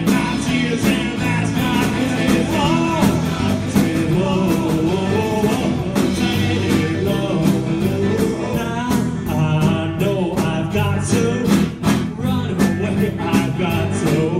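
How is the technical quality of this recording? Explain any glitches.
The recording has one clear glitch, a doubled audio track.

Doubled audio track, from 1.67 to 6.67 s: a second, full-band copy of the sound runs about one and a half seconds behind the original, roughly 5 dB quieter. It carries no decay or room colour, and it cuts in and drops out abruptly at those times. The likely cause is the same signal being captured again through a slower path, or an edit leaving two out-of-step copies mixed together.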